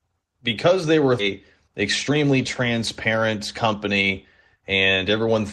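Right after "because they were", at about 1.19 to 1.21 s, there's a skip ahead. Roughly a second of audio got dropped while later audio was already queued, so playback just leaps forward. There's no filler and no real gap. The two sides are butted together almost directly, and whatever came in between is simply gone.

Then there are two stretches of jitter buffer speed-up. The buffer was holding more than its target, so the receiver kept snipping out short pitch-period-sized chunks to catch up. From about 2.09 to 4.10 s it runs at 108%, shedding something like 150 ms. From about 4.56 to 5.41 s it's at 110%, losing around 100 ms. Pitch stays put, but at those rates the speech sounds hurried. The codec band, topping out around 12 kHz, is just the call path's normal ceiling.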